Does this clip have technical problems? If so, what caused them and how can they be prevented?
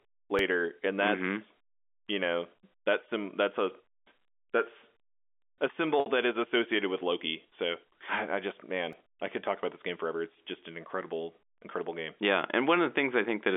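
Yes. The first fault is a repeated buffer, at 0.39 s and at 8.93 s. New audio did not reach the output in time, so the device replayed the tiny block it already held: once at 0.39 s, and four extra times at 8.93 s. At roughly 1.3 ms per block, which fits a 64-sample buffer, these repeats are far too short to be heard as a stutter. They come across as a click at 0.39 s and a brief buzz at 8.93 s, costing only a few milliseconds of sound. Unlike packet-loss concealment, the joins are hard and nothing fades. A larger playback buffer, or giving the audio thread higher scheduling priority, prevents it.

The second fault is packet loss with pitch repetition, from 6.00 to 6.06 s. About 60 ms of audio went missing, which fits two lost packets, and the receiver filled the gap by repeating the last pitch period while fading it down. The result is a held, buzzy tone that sags toward silence, then blends back into the sound with a short cross-fade. 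Unlike the buffer repeats, it is smooth and tonal rather than clicking, and it lasts much longer. A jitter buffer with forward error correction, or a more reliable network path, prevents it.

The G.711 telephone coding limits the band to roughly 250 Hz to 3.5 kHz, which is normal for that format.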